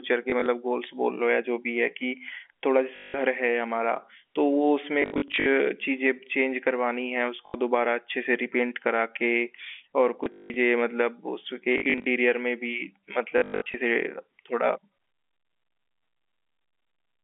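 Packet loss with last packet repeated occurs at 0.3–0.46, 2.96–3.14, 5.02–5.46, 7.46–7.54, 10.24–10.56, 11.78–12.06 and 13.38–13.74 s. Missing packets were filled by replaying the previous one, which fits 20 ms packets. Longer runs buzz near 50 Hz as a robotic stutter.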